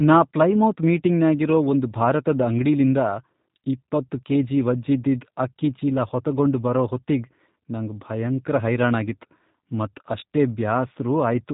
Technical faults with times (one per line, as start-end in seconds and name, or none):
0.00-11.53 G.729 codec